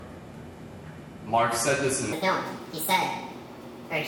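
From 2.13 s to the end, the audio has a wrong sample rate fault: it plays back 1.5 times too fast and about 7 semitones higher, a rise of roughly a fifth, which fits 32 kHz material being played at 48 kHz with no conversion. Unlike a pitch shift or time-stretch, speed and pitch move together by the same ratio, timbre and resonances slide upward with them, and there is no warbling or smearing from processing.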